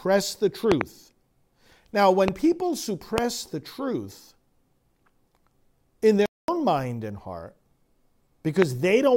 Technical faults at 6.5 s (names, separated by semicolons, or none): playback stall